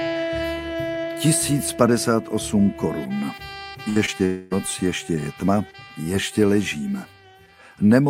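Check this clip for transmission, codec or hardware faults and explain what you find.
Yes, there are transmission faults here, all clustered in a cluster of network trouble between roughly 3.9 and 4.5 s.

First comes a burst of packet loss from 3.89 to 3.98 s. About 60 ms of audio never arrived, so the receiver stretched the last sound over the hole and faded it down. You hear a brief held, dimming tail, then the audio jumps ahead with that slice gone.

Right after, there are two short concealed packet losses, at 4.06 to 4.09 s and 4.17 to 4.21 s, each losing about 20 ms. The decoder patched each gap by extrapolating the previous sound and cross-fading back, which comes across as a quick smear or tiny wobble rather than a clean cut.

Finally, from 4.25 to 4.53 s there's a stretch of about a quarter second where the sound is replaced by a continued, decaying buzz or hiss that never drops to silence. 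The audio then resumes further along with roughly 260 ms missing. That points to a likely long network dropout, with concealment filling the whole gap.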